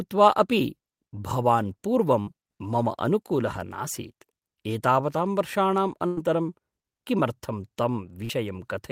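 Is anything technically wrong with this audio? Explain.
Yes. The speech has two bursts of packet loss and one short concealed packet loss.

Burst of packet loss, 2.21 to 2.29 s and 6.07 to 6.19 s: consecutive packets never arrived in time. The receiver stretched the last sound for about 52 ms and then 101 ms, fading it as a buzz or hiss, and about 60 ms and 100 ms of speech are skipped.

Short concealed packet loss, 8.25 to 8.31 s: roughly 40 ms failed to reach the decoder. The receiver extrapolated the previous sound for about 42 ms and blended back, giving a brief smear or wobble where a short sound can drop out.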